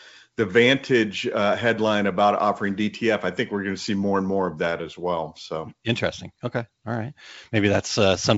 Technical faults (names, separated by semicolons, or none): none